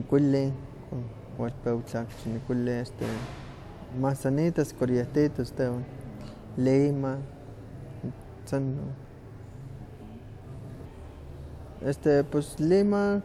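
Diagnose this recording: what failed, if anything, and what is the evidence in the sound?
Nothing in the signal chain failed: the speech recording shows no audible fault at any stage, from wiring and conversion through processing, transmission, storage and playback.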